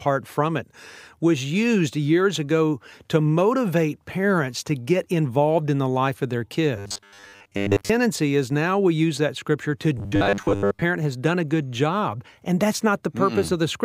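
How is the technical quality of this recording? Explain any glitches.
The speech has two bursts of robotic sound from repeated short buffers. They run from 6.77 to 7.90 s and from 9.98 to 10.83 s. A rigid metallic buzz at 100 Hz runs through the speech. The likely cause is a segment of about 10 ms repeating while most of the real audio is skipped.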